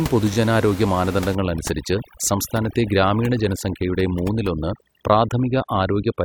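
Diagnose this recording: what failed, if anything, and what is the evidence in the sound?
Repeated frames at about 0.33 s, in the codec or storage stage: one 21.3 ms block of compressed speech plays twice, giving a brief stutter. The replay lengthens the audio by 21.3 ms.

Overdone noise removal from 1.35 s to the end, in call processing: a suppressor set too hard gates bands near its noise estimate. The room noise, about 14 dB below speech, drops and breaks up into twinkling specks.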